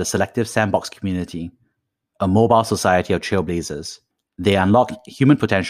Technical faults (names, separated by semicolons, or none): none